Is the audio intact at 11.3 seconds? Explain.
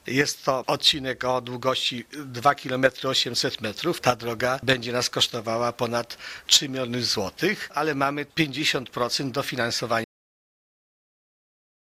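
No. At 11.3 s the audio sits inside a cut-off end: the sound halts mid-event at 10.04 s and stays at digital silence to the end, because the final buffers were never written. The waveform drops abruptly to a flat line, and the spectrogram goes blank with no decay tail.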